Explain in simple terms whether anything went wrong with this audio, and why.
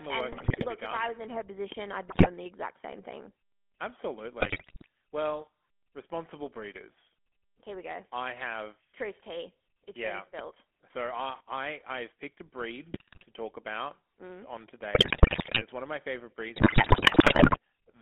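Several things went wrong with this speech recording.

The whole clip went through the GSM full-rate codec, the old mobile-phone voice coder. Everything sits in a narrow phone band, roughly 250 Hz to 3.4 kHz, and the voice has a constant buzzy, gravelly roughness. Unlike the faults below, this never comes and goes.

GSM bit errors, from corrupted data on a weak phone link, make the voice suddenly squawk, gargle or jump in loudness. This happens at 0.32 to 0.67 s (between "the work" and "look to be"), 2.08 to 2.28 s, 4.4 to 4.86 s, 12.92 to 13.25 s, 14.94 to 15.65 s (between "talk about mm on" and "it's one of my"), and worst at 16.56 to 17.57 s. Here the speech itself is mangled.

A loud pop comes as a quick double pop at 1.72 to 1.81 s and a single, louder pop at 10.39 s, just after "yeah being". The speech carries on normally underneath, which tells it apart from the bit errors. A sudden electrical spike is the likely cause.

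A stuck bit causes distortion from 10.90 to 11.40 s, with hiss filling even the small gaps. It lasts only that half second. The likely cause is one digital data bit stuck on or off.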